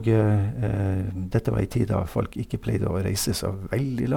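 No technical faults are audible anywhere in the speech.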